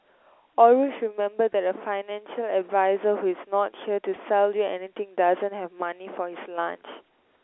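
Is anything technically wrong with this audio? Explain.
Yes. Packet loss with pitch repetition occurs at 1.53 s and again at 4.16 s. Each time about 10 ms of speech goes missing, which points to a single lost packet. The receiver covers the gap by looping the last pitch cycle it received. Because each gap is so short, the patch is brief: a momentary held, slightly buzzy smear in the speech, carried over the narrow telephone band of the A-law line.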